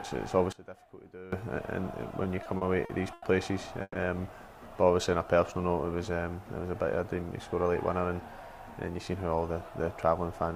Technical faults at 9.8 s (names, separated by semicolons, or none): none